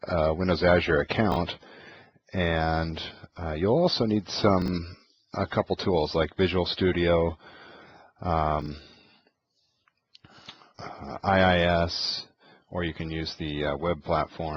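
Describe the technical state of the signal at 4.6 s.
At 4.62 to 4.68 s the signal has chunks out of order: a single 20 ms chunk is played two chunks late, so the two chunks that should follow it come first. Nothing is missing, but the 60 ms stretch is shuffled and has three hard joins, heard as a brief jumbled stutter. The waveform shows abrupt jumps at each join, with mismatched segments between them.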